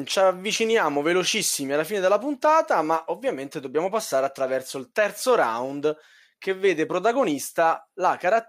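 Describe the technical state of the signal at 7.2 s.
At 7.2 s the speech signal is intact, with no audible fault at that moment.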